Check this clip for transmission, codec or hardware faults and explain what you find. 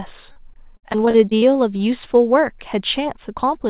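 One fault is present: repeated packet loss (robotic sound) between 0.32 and 1.81 s. Over that stretch there are ten short gaps, the longest about 58 ms, and roughly a sixth of the span is patched over. Each time packets go missing, the receiver fills the hole by stretching the last received sound, so the speech turns choppy, with fragments lost. Unlike a single dropout, the holes recur in quick succession, which produces the robotic texture. The narrow band that stops at 4 kHz fits telephone-grade G.711 coding on the call path.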